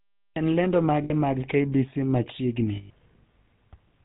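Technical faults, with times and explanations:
Throughout: GSM full-rate codec. The speech has a buzzy, gravelly roughness and nothing above 4 kHz. The codec models the vocal tract and excites it with sparse, evenly spaced pulses. That coarse excitation causes the grit. The damage is plainly audible.
1.04–1.11 s and 2.76–2.91 s: lost GSM frames. The decoder reused the last good frame's settings. This fills each gap with a rough, metallic ring instead of fresh speech. The gaps last 60 ms and 140 ms.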